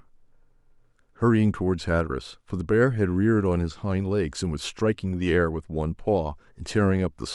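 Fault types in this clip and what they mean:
No technical faults can be heard anywhere in this speech recording; the signal holds steady, with no breaks, distortion, noise bursts or level jumps.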